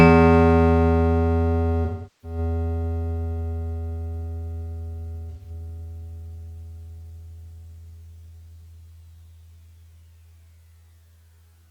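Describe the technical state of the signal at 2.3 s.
AAC frame loss with concealment is under way at 2.3 s: roughly 384 ms of coded frames, from 1.85 to 2.38 s, never reached the decoder, which rebuilt the gap from the last good spectrum. The music there turns smeared and noisy until clean decoding resumes.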